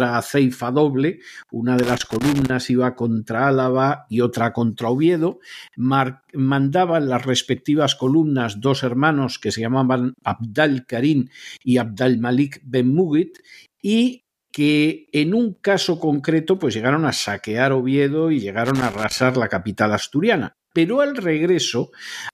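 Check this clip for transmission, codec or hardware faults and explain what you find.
Two bursts of loose connector crackle break into this speech. A worn or dirty contact somewhere in the cable path is making and breaking as it shifts, chopping the signal on and off and adding pops from any DC on the line. The first burst runs from 1.79 to 2.50 s, after "aceifa doble una" and before "iba contra". The second runs from 18.65 to 19.22 s, just before "la capital asturiana". Both sound like irregular scratchy crackle over the audio.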